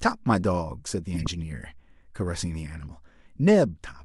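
A run of damaged compressed frames was decoded anyway from 1.14 to 1.27 s, a corrupt frame decoded fault spreading misplaced energy into a loud chirp or burst of noise across several frames.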